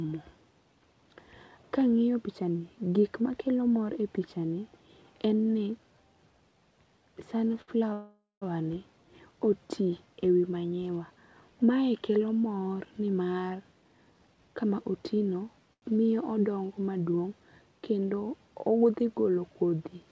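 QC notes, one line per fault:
7.48 to 7.52 s, 7.62 to 7.70 s and 15.73 to 15.84 s: short stall from a late packet. The sound is held on for 18, 60 and 88 ms with a slight buzz or dip, then resumes where it stopped, nothing skipped.
7.93 to 8.43 s: call audio freeze. About 484 ms is filled, a fading buzz or hiss ending in roughly 170 ms of silence, far longer than a stall; likely packets held up in transit.
13.75 to 14.71 s: jitter buffer speed-up. The sound runs at 114% with unchanged pitch as the receiver trims around 150 ms of repeated pitch periods to shed backlog.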